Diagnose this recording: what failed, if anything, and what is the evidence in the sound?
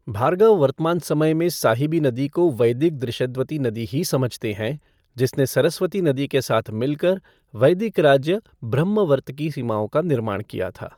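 The codec stage is the culprit, throughout the speech. There's a breathy, grainy edge up top, plainly audible, pointing to Bluetooth LC3 compression, likely at around 48 kbps in 10 ms frames, with zeroed high bands refilled by noise. Content stops near 20.2 kHz.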